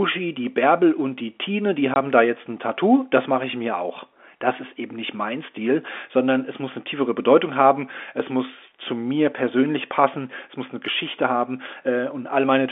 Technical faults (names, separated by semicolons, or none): packet loss filled with silence